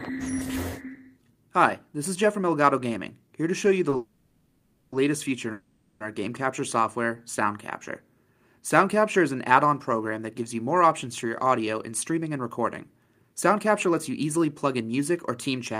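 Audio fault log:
3.89 to 3.94 s, short stall from a late packet: a packet arrived late and the jitter buffer ran dry for an instant, so the receiver held the last sound for about 30 ms before resuming at the same point. Nothing is lost, but that sound lingers slightly too long.
3.96 to 4.94 s and 5.52 to 6.02 s, call audio freeze: packets were likely held up in transit, emptying the jitter buffer. The receiver stretched the last sound into a fading buzz for about 960 ms, then about 480 ms, before continuing where it stopped, adding delay rather than losing audio.
11.25 to 15.75 s, jitter buffer speed-up: with too much audio queued, the receiver trimmed many tiny pitch-period slices, roughly a third of a second in total, to reduce the backlog. The sound plays about 6% faster at unchanged pitch and feels slightly hurried.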